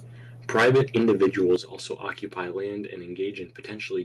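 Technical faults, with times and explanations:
0.55–1.55 s: microphone overload. Peaks run about 11 dB past the converter's limit, flattening roughly 15% of the samples. The harsh crackle on the loudest syllables is likely from excessive input gain.
0.56 s, 1.56 s, 2.7 s: microphone volume stepped down. Level drops abruptly by about 3 dB, 10 dB, then 2 dB, with the largest cut just before "also occupy". These are likely automatic input-gain reductions reacting to the distorted peaks.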